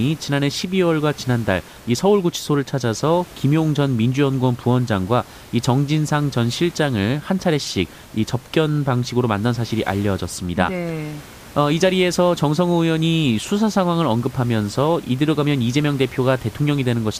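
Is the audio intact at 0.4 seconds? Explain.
Yes, the speech is intact at 0.4 seconds, with only the room's own background noise, about 23 dB below the speech, present as part of the recording.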